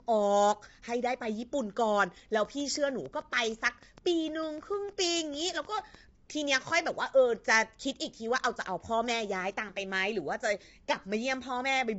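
Throughout the clip, the speech was likely squeezed through low-delay AAC compression, the AAC-ELD type used in video calls, at a rate that sounds near 24 kbps. At this low bitrate the voice is rough and grainy, with noise filling between harmonics and nothing above 7.8 kHz.

From 2.45 to 5.96 s, something injects a train of clicks, likely interference or a faulty connection, at a regular 6.6 per second, roughly twenty in all. The pulses are similar and about as loud as the speech, heard as steady ticking over it.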